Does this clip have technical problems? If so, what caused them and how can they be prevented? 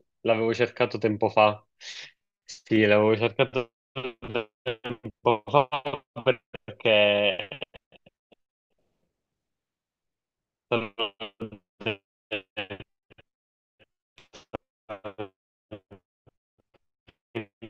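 No, nothing technical goes wrong anywhere in this speech clip, so there's nothing to trace back or guard against here.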